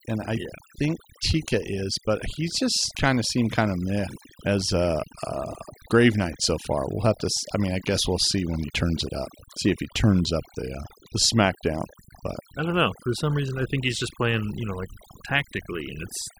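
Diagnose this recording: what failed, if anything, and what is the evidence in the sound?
The call-processing stage failed: a noise suppressor was driven far too hard, producing overdone noise removal across the whole speech clip. It pulls individual frequency bands down or out whenever their level sits near its noise estimate, and the quieter components of the voice fall into that range and get stripped too. The result, audible from start to finish, is a background that drops and breaks up into twinkling, warbling specks.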